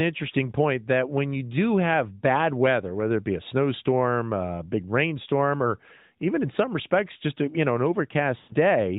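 Lost AMR speech frames occur from 8.38 to 8.55 s, right after "a you know an". Radio errors corrupted a run of frames, so the decoder kept replaying the last good pitch and vocal tract settings while turning the gain down. The sound smears into a drawn-out, fading tone and drops toward silence. The gap of about 120 ms fits six consecutive 20 ms frames. The narrowband band limit, with nothing above 4 kHz, stays audible throughout.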